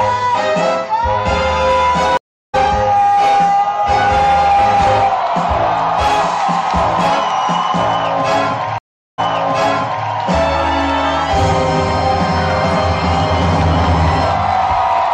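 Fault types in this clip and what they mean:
Stream reconnect: the connection broke and a fresh decoder restarted; a 0.36 s silence at 2.17 s resumes roughly 0.3 s further on, and a 0.4 s silence at 8.78 s resumes 0.91 s earlier, repeating audio. Unlike a dropout, the timeline jumps and the sound fades back in.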